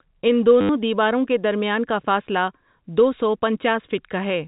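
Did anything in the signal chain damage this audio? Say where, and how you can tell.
Yes. At 0.61 s the speech turns into a short robotic stutter lasting 80 ms, to 0.69 s, just before "دیواروں کے درمیان کا", with a buzzy tone underneath. This is packet loss with the last packet repeated, a network-stage fault. Lost packets were replaced by replaying the last good one, and such repeats seldom line up with the pitch period. The buzz fits repeating 10 ms packets, about eight in a row. The band-limited G.711 telephone character stays the same throughout.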